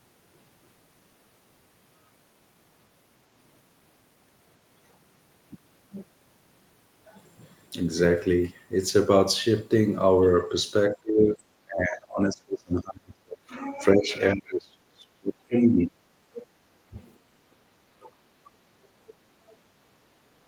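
From 10.95 to 16.48 s the talker's speech gets suppressed in double talk, dipping by up to about 35 dB across roughly four seconds. It keeps happening in shorter bursts at 16.8 to 16.96, 17.48 to 18.23 and 18.66 to 18.75 s. The likely cause is the echo canceller failing to separate the two talkers and pulling both down. Then the other side's voice leaks through in two brief scraps, at 19.07 to 19.14 and 19.5 to 19.56 s, sitting roughly 30 to 35 dB under the talker. That's likely residual loudspeaker echo the canceller didn't fully remove from the mic.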